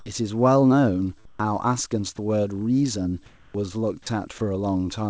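A speech recording carried over a wideband call path, with nothing above 8 kHz. From 1.25 to 1.39 s and from 3.26 to 3.54 s the real background gives way to comfort noise: steady, featureless hiss that is about 1 dB and about 6 dB quieter respectively, likely from discontinuous transmission. Unlike a dropout, no speech is lost there. At 2.16–2.18 s, 4.02–4.06 s and 4.38–4.40 s, brief bits of speech are replaced by that same flat noise, likely sound dropped by the voice detector misjudging part of the speech as background. This is distinct from the pause fills because actual speech vanishes mid-stream. At 3.51–3.54 s the speech resuming after the second pause starts abruptly, about 30 ms missing its soft beginning, likely an onset clipped by the voice detector reacting late.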